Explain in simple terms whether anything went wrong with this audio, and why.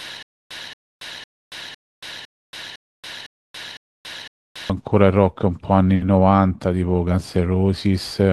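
Stutter with silent gaps runs from the very start until 4.7 s. A short burst of about 0.23 s repeats every half second, nine times, with dead silence between. The likely cause is a stalled stream replaying its last fragment. The speech meant for that stretch is lost.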